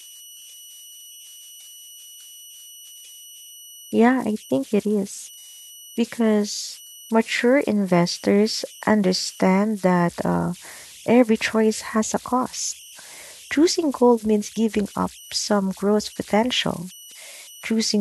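A delta-sigma converter run without dither produces converter idle tones through this whole speech clip: a tone near 3 kHz, about 23 dB below the signal, audible in pauses and as grain under quiet passages.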